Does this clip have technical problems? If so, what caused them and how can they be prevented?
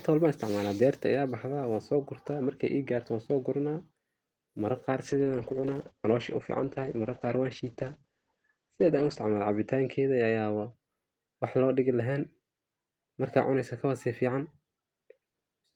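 Yes. From 5.09 to 10.79 s a call bitrate drop muffles and roughens the speech. The encoder fell from 32 to 10 kbps, staying lowest for 4.1 s, and bandwidth shrank from 20 kHz to 8 kHz. Unlike packet loss, the degradation is continuous, without gaps or glitches. Preventing it means securing steadier network capacity or setting a higher minimum encoder bitrate.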